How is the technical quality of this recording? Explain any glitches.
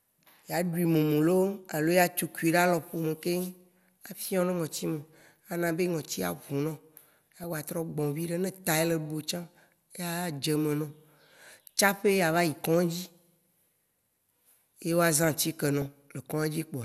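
The technical quality is compromised: the speech is dull throughout, with three short bursts of corruption.

Throughout, upper frequencies are missing and a granular, gurgling texture remains, likely MP2 compression starved of bits, which fits a rate around 80 kbps.

At 5.20–5.26 s, 7.32–7.44 s and 15.82–15.93 s, DAB burbling: residual bit errors corrupt sub-band samples, producing brief blips of noise.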